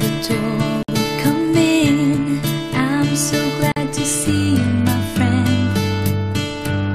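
At 0.83 s and 3.72 s, gaps at joins of encoded pieces open silences of about 56 and 45 ms, left by untrimmed encoder delay and padding; unlike a dropout, the sound resumes exactly where it stopped.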